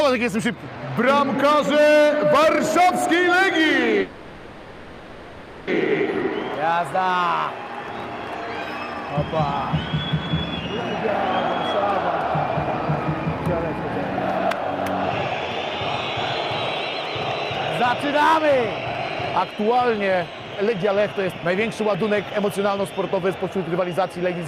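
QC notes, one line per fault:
4.01–5.69 s, call audio freeze: the audio stalls for 1.66 s, the last sound drawn out as a fading buzz rather than silence, then picks up exactly where it stopped. Likely packets held up in transit draining the jitter buffer, so nothing is lost, but 1.66 s of delay is added.
19.38–20.20 s and 20.63–24.27 s, jitter buffer speed-up: playback runs at 111% speed with unchanged pitch and sounds hurried. The receiver repeatedly cut short pitch-period slices to shed excess buffered delay, roughly a tenth of a second in the first stretch and around 0.4 s in the second.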